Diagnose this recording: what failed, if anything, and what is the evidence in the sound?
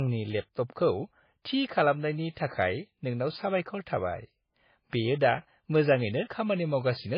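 The failure is at the codec stage. The speech shows transcoding between lossy codecs from start to finish. Nothing is present above 5 kHz, so the top end sounds dull and muffled. Two kinds of coding damage are heard together, layered rather than separate. The sound points to a low-rate MP3, near 19 kbit/s, likely re-encoded as AAC-LC near 32 kbit/s. The second encoder spent bits on the first one's artefacts, and the 5 kHz ceiling stayed.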